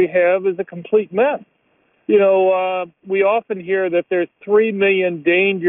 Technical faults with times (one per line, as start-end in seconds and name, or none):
none